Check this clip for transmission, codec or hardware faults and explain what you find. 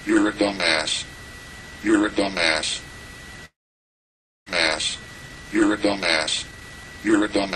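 Two transmission faults are audible, both tied to network delivery.

From 3.45 to 4.51 s there is a long network dropout, likely from packets failing to arrive. The receiver stretches the last sound into a fading buzz, then near-silence for most of that second, and the audio resumes with about 0.6 s of material missing.

From 4.93 to 7.47 s a jitter buffer speed-up follows, as the receiver drains the extra delay that built up during the gap. It cuts repeated pitch-period-sized slices, roughly 0.4 s in total, so the audio plays about 14% fast at unchanged pitch and sounds hurried.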